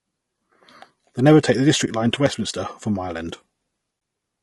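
The speech sounds rough and grainy throughout, with a hiss-like fill between the harmonics of the voice and a top band that sounds thin and somewhat synthetic. This is likely low-delay AAC compression of the AAC-ELD kind used for video calls. Its short frames resolve pitch harmonics poorly, so at a modest bitrate, consistent with around 32 kbps, the coder spreads noise across the spectrum instead of keeping the harmonic structure clean. Twice the sound briefly dips with soft edges: from 1.85 to 1.88 s, and again from 3.99 to 4.01 s. Each gap matches AAC frame loss with muting. A missing frame of about 20 ms was replaced by zeroed spectrum, and the overlapping decoder windows faded the audio out and back in around the hole.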